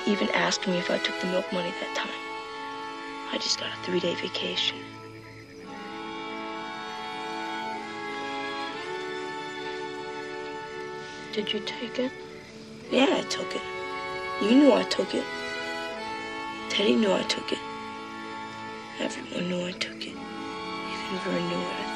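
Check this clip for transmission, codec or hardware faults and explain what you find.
Nothing in the clip points to a transmission, codec or hardware problem. The sound carries on steadily throughout, with nothing to report.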